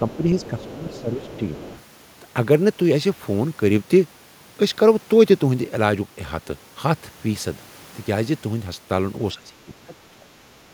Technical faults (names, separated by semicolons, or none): speech suppressed in double talk; other side's voice leaking through